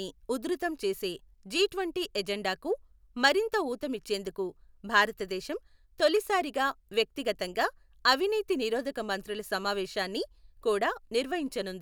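No technical faults can be heard anywhere in the recording, and the signal stays steady and intact throughout.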